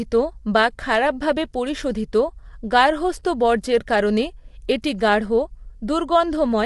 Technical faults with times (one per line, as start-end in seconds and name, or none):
0.00-6.66 low-delay AAC compression